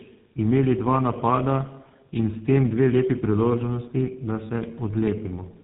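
Throughout, tandem speech coding, likely repeated GSM-type low-rate coding, leaves rough, muffled, warbly speech; a spectrogram shows smeared harmonics and nothing above 3.9 kHz.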